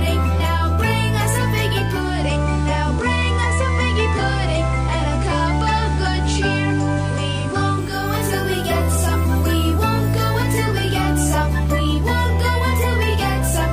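Digital radio blending to analogue occurs from 1.83 s to 8.15 s. The receiver lost the digital stream and cross-faded over about 0.42 s to the station's FM broadcast, then faded back. During the FM stretch, hiss rises to roughly 25 dB below the sound and the level drops by about 1 dB.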